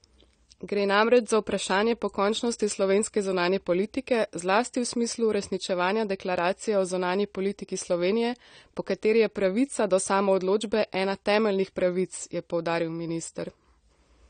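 AAC compression runs through the whole clip. Nothing is heard above about 9 kHz, so the speech sounds dull and closed-in, and the damage is plainly audible as a smeared, warbling texture on held vowels and a fizzy edge on sibilants. The likely cause is a low-bitrate AAC-LC encode, which fits roughly 32 kbps. The encoder lowers its cut-off and quantises each frame's frequency lines coarsely, leaving spectral gaps that shift from frame to frame.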